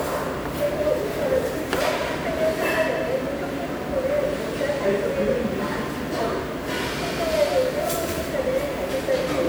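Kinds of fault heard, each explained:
Generation loss: swirly, smeared, hollow texture with blurred attacks, though content reaches about 20.1 kHz, which a single low-bitrate encode wouldn't leave; likely around ten successive lossy passes, fitting WMA 1 at 128 kbit/s, each adding fresh quantisation noise.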